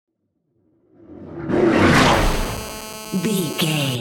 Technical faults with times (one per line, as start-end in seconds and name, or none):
2.13-3.96 GSM phone buzz